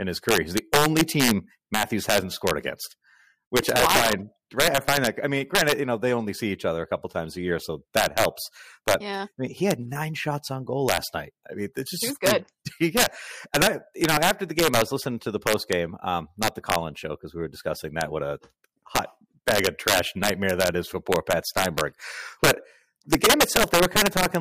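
Throughout the speech, loud peaks trigger integer overflow: with the signal pushed about 6 dB too hot, values past the integer limit wrap to the opposite sign instead of being held there. Under one percent of samples are affected, yet each one produces a violent crack, far harsher than the flattened buzz of clipping.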